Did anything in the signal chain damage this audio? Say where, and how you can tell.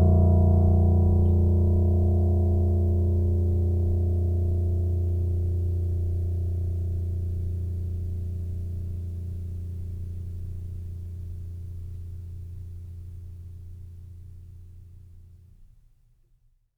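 No, nothing in this music points to damage at any stage of the chain.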